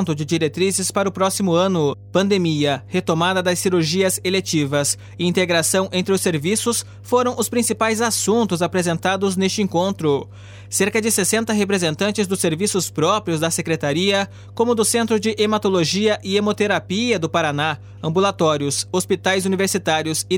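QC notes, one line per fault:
Throughout, mains hum. A steady low tone sits under the whole clip at 50 Hz, with some low harmonics above it, at about 20 dB below the signal. Power-line current leaks into the signal path, likely from a ground loop or a nearby transformer.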